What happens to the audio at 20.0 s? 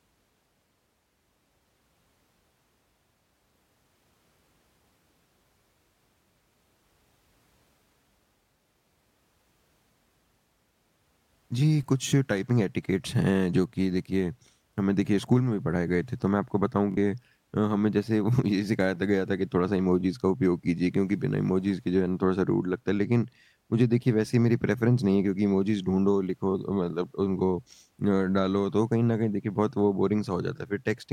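At 20.01 to 20.04 s there's a brief Bluetooth stutter. A packet arrived late or got lost, so the receiver replayed its last slice of about 21 ms, which sounds like a single quick hiccup. The speech then picks up further along, as though it kept playing underneath.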